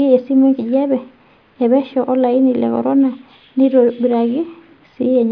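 No technical faults are audible anywhere in the recording.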